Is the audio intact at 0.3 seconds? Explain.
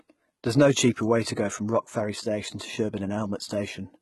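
No. At 0.3 s, as throughout the clip, the treble is gritty and metallic, with nothing above 11.8 kHz, which fits a very low bitrate near 16 kbps. This is likely HE-AAC compression, its replicated upper bands showing on a spectrogram as blocky, copied-looking patches under a hard ceiling.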